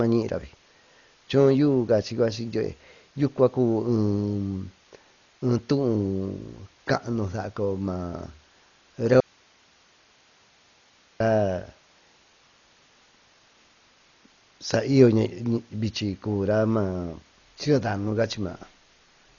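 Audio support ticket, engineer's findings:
Speech dull and band-limited throughout, nothing above 6.9 kHz, rough fluttering noise around voiced tones, heavy codec damage. Likely Dolby Digital compression at a low rate, consistent with about 40 kbps: band narrowed, many frequency lines left without bits, dither noise filling them.

Audio dropout to a faint residue, 9.20 s to 11.20 s, 2.0 s. Signal cuts out abruptly and returns abruptly; gap holds only hiss, around 35 dB below programme level. Likely upstream signal loss while the downstream path stayed live.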